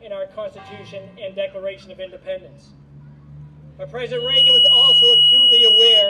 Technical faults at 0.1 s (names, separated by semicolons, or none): none